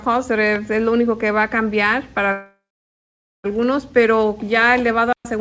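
Call audio with nothing above 8 kHz, which points to a wideband call codec such as G.722; on a spectrogram the energy stops sharply at that line. A loud pop lands at 0.56 s: a single sharp click, about 5 dB above the surrounding signal. In the waveform it is one narrow spike standing out from the sound, and on a spectrogram a thin vertical stripe across all frequencies. The likely cause is an electrical transient such as a switch or driver glitch. From 2.32 to 3.46 s there is a call audio freeze. The last sound is carried on as a fading buzz, then roughly 0.86 s of silence, before the audio resumes exactly where it stopped, so nothing is lost but everything afterwards arrives about 1.12 s later. The spectrogram shows a smeared, steady band fading into a blank gap. This is likely packets held up long enough to empty the jitter buffer. At 5.13 to 5.25 s a playback stall cuts the sound off mid-flow for 120 ms before it continues. 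The waveform drops abruptly to a flat line and the spectrogram shows a clean empty column, likely from the player running out of data or its thread being briefly blocked.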